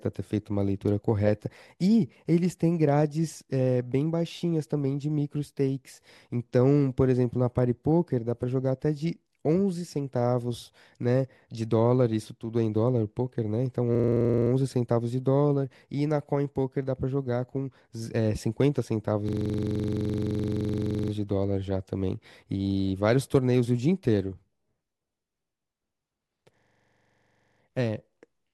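Speech with a system hang loop at 13.95–14.51 s, 19.29–21.12 s and 26.58–27.61 s: a 42.67 ms fragment repeats at 23.4 Hz, consistent with a 2048-sample ring buffer.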